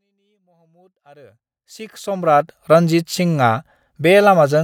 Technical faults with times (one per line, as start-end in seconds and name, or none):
none